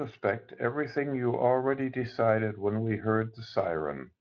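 No fault turns up anywhere in the speech, and the Speex coding it passed through leaves only a light imprint on the signal.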